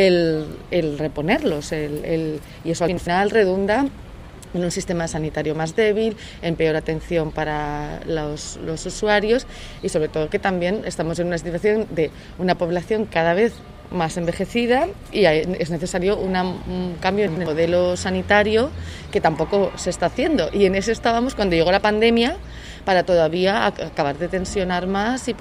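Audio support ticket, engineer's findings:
Chunks out of order, twice: 2.88 to 3.07 s and 17.28 to 17.46 s. Buffer or packet reordering in the playback/capture chain, one chunk of about 93 ms delivered a slot late, which fits a 4096-sample buffer at 44.1 kHz. Nothing dropped, but the sequence swaps. Audible as a brief jumbled stutter in the sound, with three hard joins where mismatched chunk edges meet. Check queue handling and jitter buffer ordering.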